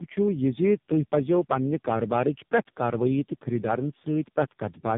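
Tandem speech coding runs through the whole of this speech clip: the audio sounds rough, muffled and warbly, with nothing above 3.7 kHz. This points to a call decoded and re-encoded at several network borders, each speech coder working on the already damaged output of the one before, so the errors pile up. The smeared texture fits a chain with about three speech codecs, starting and ending with low-rate AMR-NB at 6.7 kbit/s.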